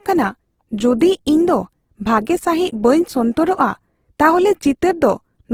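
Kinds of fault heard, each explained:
Low-bitrate audio saved at a high bitrate: the speech carries the artefacts of a heavily squeezed codec, likely an Opus encode at around 16 kbit/s later re-saved as MP3 at around 192 kbit/s, which can't restore the detail the first encode stripped out.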